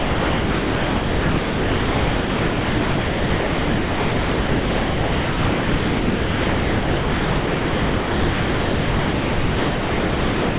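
The sender's voice detector likely classed the whole speech signal as background and never resumed transmission, so this is sound dropped by the voice detector across the entire clip, from 0.00 to 10.59 s. In place of the speech, the receiver fills the gap with generated comfort noise, heard as a steady, featureless hiss that holds constant throughout, band-limited to below 4 kHz by the G.711 call path, with no speech returning at any point.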